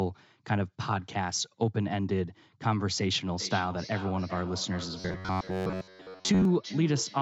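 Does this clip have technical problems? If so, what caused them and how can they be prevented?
Yes. From 3.38 s to the end there's feedback echo between two devices: each stretch of speech comes back roughly every 0.4 s, at most about 15 dB below the speech. Keep only one device's audio live in the room, or use headphones.

From 5.00 to 6.45 s there's a robotic sound from repeated short buffers, a metallic 93.8 Hz buzz. The likely cause is late audio being padded by repeating roughly 11 ms chunks, most of the sound in that stretch. A steadier network or a larger jitter buffer would prevent it.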